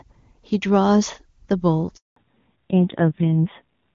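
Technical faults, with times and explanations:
1.96 to 2.16 s, handover gap: the speech fades out within a few tens of milliseconds and stays silent for 200 ms. The call was being passed from one network link to another, and no speech frames arrived until the new link took over, so whatever was said in that span is gone. On the waveform this is a short taper to a flat line. On the spectrogram it is a clean vertical band with no energy at any frequency.
2.16 s to end, fallback to narrowband: right after the gap the speech becomes duller and rougher. Before the switch it had the open top end of HD Voice (AMR-WB), which points to a high rate such as 23.85 kbit/s. After the switch the sound fits an older narrowband AMR codec at a low rate, around 5.9 kbit/s. On the spectrogram, energy stops sharply at 4 kHz for the rest of the clip.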